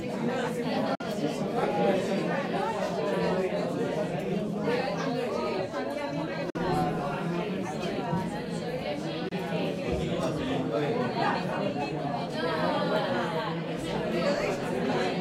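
At 0.95 s the sound cuts out and returns at 1.02 s. The same gap recurs from 6.50 to 6.57 s, and a shorter one runs from 9.29 to 9.33 s. Each is a hole of silence. After each gap, the sound picks up further along, as if it had kept playing. This is likely a Bluetooth dropout, where audio packets miss their deadline at the headphones and are discarded, leaving silence until good packets arrive.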